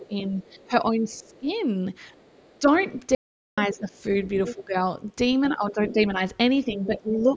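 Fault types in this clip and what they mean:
Speech suppressed in double talk: the talker's level sags while the far-end voice is also present. It drops by about 15 dB within the first 1.5 s and by about 10 dB from 2.59 s to the end, likely because the echo canceller ducked both voices.
Other side's voice leaking through: a second, quieter voice runs beneath the talker from 0.42 s to 7.25 s, roughly 20 dB down. It is likely loudspeaker playback that the echo canceller failed to remove fully from the microphone signal.
Audio dropout to silence: from 3.15 s to 3.58 s the sound stops dead for 0.43 s. The gap is silent with no room tone, likely lost input while the recorder kept writing silence, so anything said there is gone.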